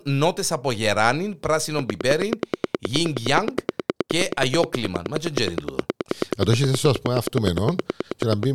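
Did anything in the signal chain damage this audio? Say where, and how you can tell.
Yes. A train of clicks starts at 1.79 s, just after "νότες από γεράνιν", and runs to 8.44 s: around seventy near-identical pulses at a regular 9.5 per second, standing roughly 20 dB above the speech and plainly audible in the pauses. The steady spacing and identical shape point to a periodic source outside the programme material, likely interference coupling into the analogue wiring or an interface intermittently injecting a pulse on a fixed cycle.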